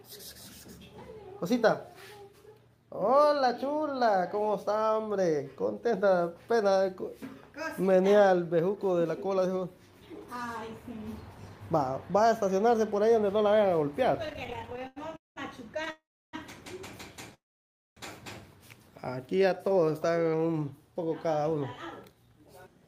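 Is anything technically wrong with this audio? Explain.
Yes, there are four kinds of network-timing fault, all in the second half of the clip.

From 14.27 to 15.38 s there are repeated stalls (stutter): about twenty short hitches, the longest around 198 ms. Packets kept arriving late, so the jitter buffer kept running dry and the receiver stretched the last sound to cover. That filler makes up 466 ms, about 42% of the span, so the audio drags and stutters, but nothing is actually lost.

Then come two call audio freezes, at 15.90 to 16.35 s and 17.34 to 17.98 s. The sound hangs and fades into silence, for 310 ms in the first and 570 ms in the second. The likely cause is packets held up in transit, which emptied the buffer. Playback then picks up where it left off, so each freeze inserts a gap of 430 ms and 624 ms respectively.

From 19.37 to 20.80 s there's a jitter buffer slow-down. The receiver rebuilt its reserve by repeating single pitch periods over and over, adding 170 ms. 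The audio plays at about 89% speed with the pitch unchanged, so it sounds drawn out.

Finally, from 22.05 to 22.83 s, a jitter buffer speed-up trims short pitch-period chunks, roughly 70 ms in total, to shed excess delay. The audio runs at about 110% speed at the same pitch and sounds a bit hurried.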